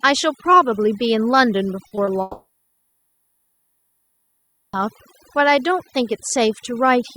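Overdone noise removal runs through the whole speech clip. The denoiser was set too hard. It pushes individual frequency bands down whenever they sit near its noise estimate. Quiet parts of the voice fall below that line and get cut too. Between phrases the background drops, with small twinkling specks.

Three short concealed packet losses follow close together. They fall at 1.87 s, 1.95 s and 2.05 s. About 40 ms is missing at the first, and 20 ms at each of the others. Each time, that much audio failed to reach the decoder in time. The receiver bridged each gap by extending the preceding sound, then blended back into real audio. The result is a quick smear or wobble, with a brief flicker across those few tenths of a second.

A long network dropout comes next, from 2.21 s to 4.75 s. Roughly 2.5 s of audio is gone. The likely cause is that nothing arrived for that whole stretch. At first the receiver keeps the last sound going as a fading buzz or hiss for about a quarter of a second. 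Then there is silence for about 2.3 s. Speech resumes at 4.75 s, and the lost part is never heard.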